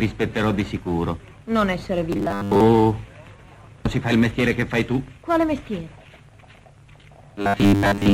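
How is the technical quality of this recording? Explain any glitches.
Two stretches go robotic, from 2.13 to 2.61 s and from 7.42 s to the end at 8.14 s. Both sound like robotic sound from repeated short buffers: a stiff, metallic 100 Hz buzz replaces most of the real audio. That's likely a 10 ms chunk looping while fresh data arrives late.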